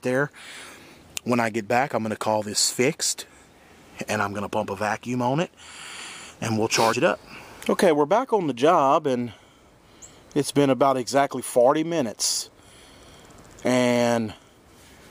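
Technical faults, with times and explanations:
6.92 s, damaged data in a compressed stream: a brief blip where a stretch of the encoded bitstream arrives corrupted, so the decoder misreads the affected frame, loses its place and must hunt for the next valid frame header before playback resumes. On a spectrogram it shows as a thin vertical disturbance, under 20 ms wide, unrelated to the surrounding content; the waveform shows a short break in the signal's shape.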